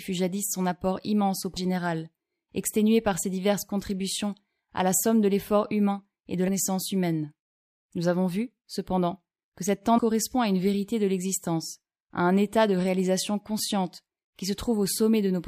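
Compressed frames are skipped at three points in this speech. At 1.56 s, after "son apport immense au", about 300 ms of audio is missing. At 6.47 s, after "l'effort humain et de", roughly 200 ms drops out. From 9.97 to 9.99 s, between "vu cependant que cette" and "à une vérité de", about 200 ms is lost. Each jump is a multiple of a 26.1 ms frame, so whole decoded frames never reached the output. Overlapping neighbour frames turn every join into a short smeared blip rather than a sharp click.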